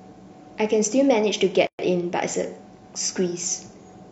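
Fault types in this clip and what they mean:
Gap at a join of encoded pieces: a 120 ms gap at 1.67 s between separately encoded segments, with smeared edges; speech resumes where it stopped, unlike a dropout.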